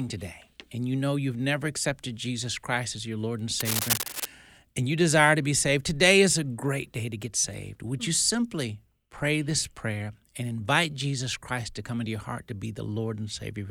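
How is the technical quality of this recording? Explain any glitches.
There's one clear glitch in this speech recording, a burst of cable scratch noise from 3.60 to 4.26 s, just before "and you desire to". For about two-thirds of a second a dense, uneven scratching and rustling sits right on top of the voice, roughly as loud as the speech itself. It's likely a worn cable or connector being moved, so its contact resistance jumps around rapidly and dumps those ragged bursts of noise into the signal.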